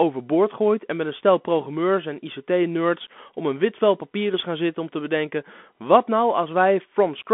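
From start to finish the speech runs through a Bluetooth CVSD headset codec: nothing above about 3.8 kHz, a narrow 200 Hz to 3.5 kHz band, scratchy s sounds where the one-bit step can't keep up, and a grainy hiss underneath, consistent with 64 kbps CVSD.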